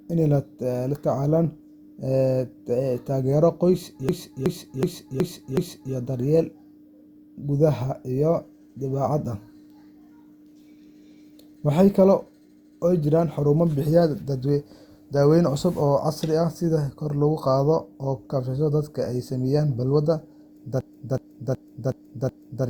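A system hang loop hits twice. At 4.09 s, just after "taageero qoys", the computer or driver stalled while the sound hardware kept replaying its ring buffer, so one 0.37 s slice of speech repeats five times until 5.94 s, a choppy stutter at about 2.7 per second. The loop length fits a 16384-sample buffer. The identical stall returns from 20.81 s to 22.66 s, with the same five repeats.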